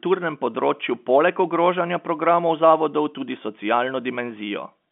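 No faults present; the speech sits in the G.711 telephone band, with nothing above 3.7 kHz.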